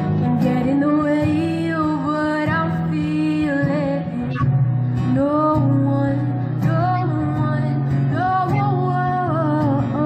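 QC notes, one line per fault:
4.33–4.43 s, 6.97–7.09 s and 8.48–8.58 s, corrupt frame decoded: each is a sharp chirpy burst about a tenth of a second long, which fits two or three damaged frames played anyway. The misread codes throw energy to the wrong frequencies, peaking fairly loud, the last one a bit quieter.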